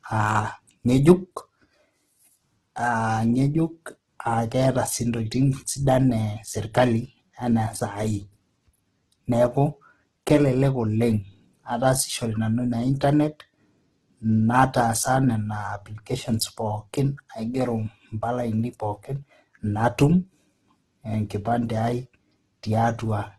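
All the way through, the speech sounds grainy and rough with nothing above 12.2 kHz, likely heavy Opus compression, its music mode starved at around 12 kbps and noise-filling bands.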